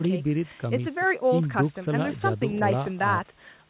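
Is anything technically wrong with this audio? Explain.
No, nothing here is wrong: it's speech that came over a call path using what sounds like G.711 mu-law, so there's nothing above about 4 kHz, which is just how that narrowband telephone codec is meant to sound.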